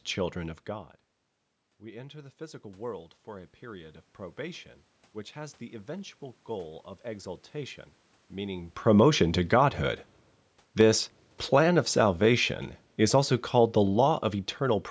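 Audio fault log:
1.78–4.04 s, automatic gain rising: After the input level drops by about 18 dB, the gain control slowly lifts its gain by about 5 dB, so the voice and the room noise swell together over roughly two seconds, settling just before "probation which has the". On a waveform the envelope, including the quiet gaps between phrases, widens steadily. On a spectrogram the whole band up to 8 kHz, noise floor included, brightens together rather than the speech alone.
10.66–14.86 s, automatic gain falling: The gain control judges the input too loud or its background noise too strong and eases its gain down by about 5 dB over roughly four seconds, running nearly to the end of the clip. The voice starts full and sinks gradually, and the background noise sinks with it, which separates this from a talker simply moving away. The waveform shows a slowly tapering envelope. The spectrogram shows all frequencies and the noise floor dimming evenly.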